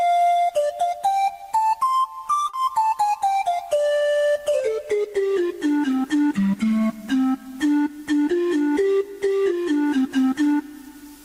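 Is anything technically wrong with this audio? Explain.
Yes. There is one short concealed packet loss, from 2.49 to 2.55 s. About 40 ms of audio arrived too late for the decoder. The receiver filled the gap by extending the preceding sound, then blended back. It is heard as a brief smear or wobble.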